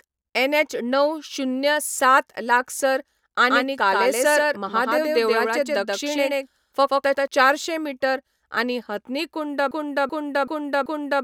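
From 3.50 to 7.28 s, a second capture path or a misaligned edit likely mixed the speech in twice, creating a doubled audio track. A full-band copy trails about 150 ms behind at roughly equal loudness, with no decay or room colour. It starts and stops abruptly, ending just before "चारशे मीटर आनी हथनी".

From 9.71 s to the end, the stream likely stalled and kept resending its last fragment, a broken-record loop. Right after "मीटर आनी हथनी कुंड", a 0.38 s piece repeats exactly, back to back, four times, and the speech that should follow is lost.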